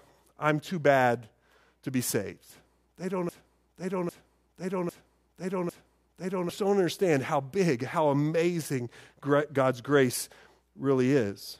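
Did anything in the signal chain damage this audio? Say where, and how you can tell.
Yes: a broken-record loop from 3.29 to 6.49 s. A 0.8 s piece of speech repeats four times back to back, identically, and the speech that belonged there is lost. The cause is likely a playback or stream stall that kept resending its last buffered fragment.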